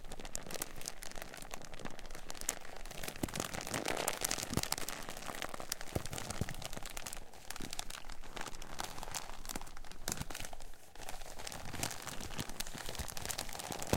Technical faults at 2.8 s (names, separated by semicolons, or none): repeated buffer